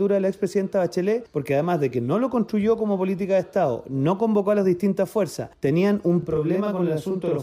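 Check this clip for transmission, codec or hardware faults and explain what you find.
One fault appears, a channel delay (doubling), from 6.23 s to the end at 7.43 s. One channel runs about 40 ms behind the other, and when the two are summed to mono the late copy sits right behind the original at equal strength, so every onset sounds doubled. Room reverb would decay into a tail, and a much shorter offset would only colour the tone as comb filtering. Here there is one distinct, undiminished repeat.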